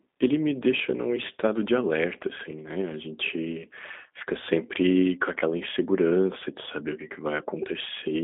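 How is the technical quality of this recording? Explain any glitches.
The recording carries G.729 codec damage throughout, plainly audible from start to finish. The sound is squeezed into roughly 200 Hz to 3.7 kHz, with nothing above 3.8 kHz, and it has a rough, synthetic texture, consistent with about 8 kbit/s G.729A. Here, the speech is rebuilt from a vocal tract filter, a pitch predictor and a few pulses per frame, rather than the waveform being preserved. That rebuilding produces the grainy, buzzy edge, which a clean telephone band filter, dull but smooth, would not.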